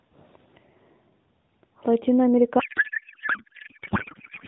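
From 2.60 s to the end, the speech gives way to a codec payload misread. The AMR narrowband mobile codec carrying it sounds lightly coded before then, which fits a 12.2 kbps mode. Here the frames were packed octet-aligned but unpacked as bandwidth-efficient, so every field is read from the wrong bits. What comes out is garbled warble that barely tracks the speech, not a dropout's silence or the steady buzz of a low bitrate.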